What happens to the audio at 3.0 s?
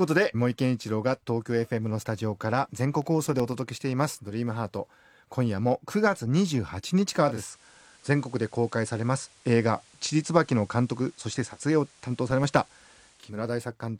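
Around 3.0 s the disc playback hits CD scratch ticks. A surface scratch corrupts more data than error correction can rebuild, so on each revolution the player conceals the damaged samples by interpolating or briefly muting them. From 2.89 s to 3.52 s this happens six times, about eight per second, each gap lasting a few milliseconds at most. The speech picks up a short run of small, evenly spaced clicks with tiny dropouts.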